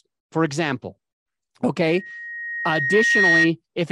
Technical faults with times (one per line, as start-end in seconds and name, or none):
1.85-3.51 loudspeaker feedback squeal